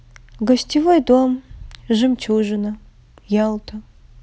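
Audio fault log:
No fault found in this speech clip.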